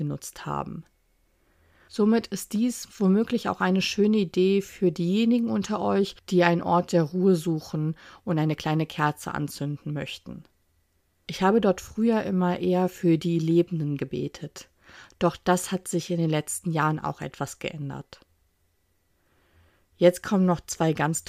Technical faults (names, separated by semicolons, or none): none